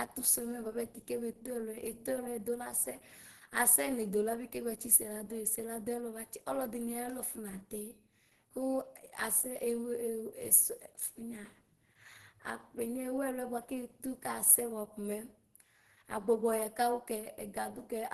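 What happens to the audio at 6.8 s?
At 6.8 s the speech carries the same Opus compression damage heard across the whole clip. It sounds muffled and hoarse, with a grainy, roughened edge, which fits the encoder's hybrid speech mode at a low rate. The likely cause is a bitrate around 16 kbps. Nothing sits above 12.1 kHz, so a spectrogram shows a flat ceiling there, with noisy, smeared texture replacing clean harmonic lines below it.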